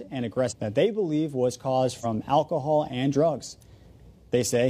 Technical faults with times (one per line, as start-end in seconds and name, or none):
0.47-0.53 compressed frames skipped
2.00-2.05 compressed frames skipped